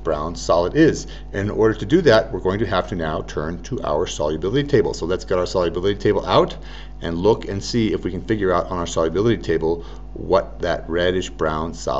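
From the first moment to the last there's mains hum sitting under the audio, a steady low drone at 50 Hz with a few low harmonics stacked on top. Power-line energy has leaked into the signal, most likely through a ground loop or a transformer too close to the gear. It's not subtle either: it sits roughly 15 dB below the wanted sound.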